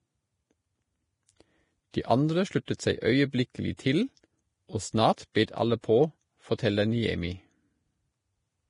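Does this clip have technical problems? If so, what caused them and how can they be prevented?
Yes. Throughout the speech the treble stops dead at 10.5 kHz and what remains sounds hissy and grainy, which points to heavy Vorbis compression, likely at a bitrate around 30 kbps. Unlike steady background hiss, the grain tracks the speech and blurs consonant attacks. Encoding at a higher Vorbis quality setting would prevent it.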